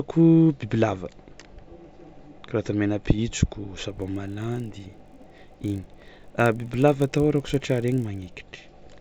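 A speech clip with a 50 Hz buzz riding on the sound from 3.88 to 8.4 s, present only while there is signal. The resampler restarted on every block, which fits a 16 kHz to 48 kHz conversion, leaving a small error at each 20 ms block edge that repeats as the buzz.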